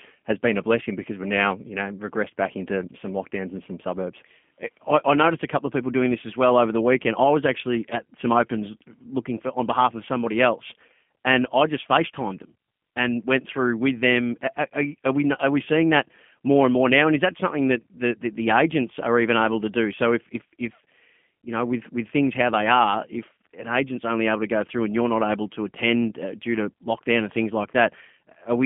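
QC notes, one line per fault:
Throughout: G.729 codec. The speech is confined to about 150 Hz to 3.5 kHz, with nothing above 3.6 kHz, and has a rough, synthetic buzz from pulse-coded excitation, which points to an 8 kbit/s G.729A stream. Simple band-limiting would sound muffled but stay smooth.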